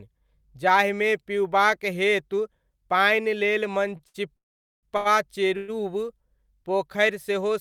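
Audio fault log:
3.97–4.01 s, 4.07–4.16 s and 4.97–5.07 s, short stall from a late packet: Right after "पिउबाक हेतु पानि लेल", the sound briefly hangs, held too long with a slight buzz or dip, first for about 18 ms and then 68 ms, and again later for 83 ms. Each time a packet missed its slot, the jitter buffer emptied, and the receiver stretched the last sound until the packet arrived. Playback then resumed from the same point, so nothing is lost, only delayed.
4.36–4.85 s and 5.57–5.70 s, call audio freeze: In the first event, the sound turns into a buzz or hiss that quickly dies away, leaving about 450 ms of silence before the audio picks up again. In the second, about 111 ms of held, buzzing or hissing sound fills the gap without dropping to silence. The likely cause is packets held up in transit, starving the jitter buffer so the receiver had to invent sound until they arrived. The audio then continued where it stopped, so gaps were inserted but nothing is missing.
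6.53–7.15 s, jitter buffer slow-down: Over this stretch the speech drags, running at about 94% speed while the pitch stays the same, with slightly drawn-out sounds. The receiver was building up a reserve in its buffer by repeating single pitch periods or bits of pauses many times in a row, adding about 39 ms in total. This stretches the speech in time without shifting its pitch.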